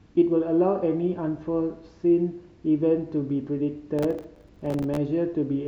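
From 3.99 to 4.97 s the overloaded processor misses dozens of few-millisecond buffers, each a silent gap, heard as processor overload crackle tearing the speech.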